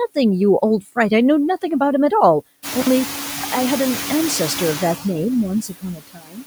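Noise suppressor artifacts run through the whole recording. The suppressor pulls steady noise down by only about 3 dB, so the background sinks between words and rises under them. At 2.79 s, soon after the room noise swells around 2.5 s, an intermittent contact cuts the sound out for about 49 ms. Crackle marks both edges of the gap, which ends by 2.87 s. From 5.62 to 6.44 s, the suppressor mistakes speech for noise and cuts it. Parts of the speech sound swallowed or faint for about 0.7 s, dropping by up to about 21 dB.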